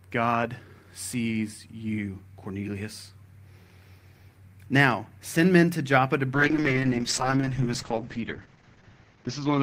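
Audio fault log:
6.35 s to the end, call bitrate drop: the speech turns coarse and muffled and does not clear before the clip ends, which fits the encoder being pushed from around 32 kbps down to 8 kbps, where it stays for the last 2.9 s. Fewer bits mean rougher coding, and the upper band is discarded. On a spectrogram, energy above 8 kHz vanishes at a hard ceiling, with smeared, blocky detail below it.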